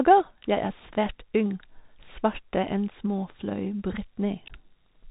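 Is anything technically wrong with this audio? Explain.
Yes. Throughout the speech, the audio shows a Bluetooth CVSD headset codec. Each sample is coded as a single up-or-down bit with an adapting step size, which fits a 64 kbps stream. Content stops at 3.8 kHz, loud high-frequency peaks overrun the step and distort, s sounds come out scratchy, and a granular hiss sits beneath.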